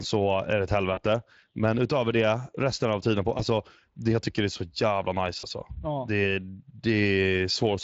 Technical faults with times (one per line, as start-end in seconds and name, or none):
0.00-7.84 Speex codec
0.93-1.04 VoIP packet loss concealed by the speech codec
3.37-3.41 VoIP packet loss concealed by the speech codec
5.39-5.45 VoIP packet loss concealed by the speech codec